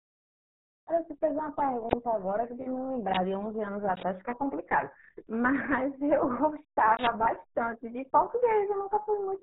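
Muffled, gargly speech throughout, with nothing above 3.9 kHz and heavy artefacts, which fits the RealAudio 14.4 codec, an 8 kbit/s dial-up speech coder.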